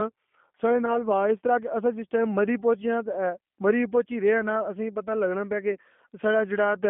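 The whole clip runs through a G.729 codec. The top end stops around 3.5 kHz and the bottom around 200 Hz, and the speech has that plainly rough, slightly synthetic texture you'd expect from an 8 kbit/s pulse-based vocoder rebuilding each frame.

From about 0.86 to 1.01 s there's VoIP packet loss concealed by the speech codec. The gap fits a single lost 10 ms frame. The decoder stretches out its last pitch and filter into a brief fading fill and needs the rest of that stretch to recover before "وا اس طرح کے".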